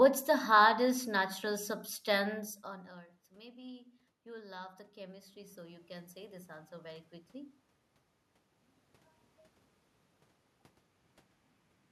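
Speech, with automatic gain rising from 1.44 to 7.61 s. After the input drops by about 22 dB, the gain control slowly adds about 11 dB, and the room noise swells along with the voice. That shared swell separates it from the talker moving around 2.5 s.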